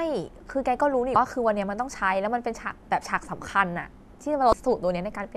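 At 1.13 to 1.16 s, a short glitch cuts into the speech. This is damaged data in a compressed stream. Corrupted bytes make the decoder misread frames and lose sync until it finds a valid header. The same brief glitch returns at 4.50 to 4.53 s.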